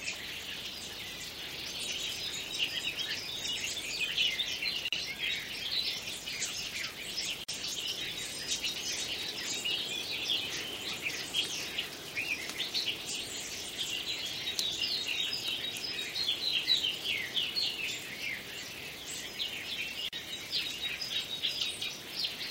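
A recording of everyday sounds with three brief silences, each a gap at a join of encoded pieces: 4.88–4.93 s (about 41 ms), 7.44–7.48 s (about 46 ms) and 20.09–20.13 s (about 41 ms). Each section was encoded separately and joined untrimmed, so encoder start delay and last-frame padding remain. The waveform shows flat-lined notches, and the spectrogram shows thin vertical blank stripes with slightly smeared edges. The sound resumes exactly where it stopped.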